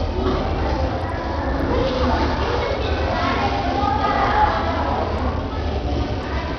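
From start to finish the everyday sound carries heavy coding damage that points to Bluetooth SBC compression as the likely cause, at a rate consistent with roughly 64 kbps. With so few bits to share, the upper sub-bands are starved: the treble thins out and flickers in and out rather than holding steady. What remains is coarsely quantised, so a gritty, granular noise and aliasing tones sit on top of the material throughout.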